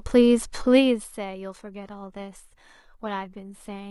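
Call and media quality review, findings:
Quality changes abruptly at 1.49 s and stays degraded to the end, with codec artefacts rising on the speech and no gap at the switch. Adaptive stream at a lower bitrate: player dropped to a low-bitrate rendition mid-stream. Sound fits a move from around 96 kbit/s AAC to about 20 kbit/s HE-AAC, where the upper band is reconstructed rather than coded.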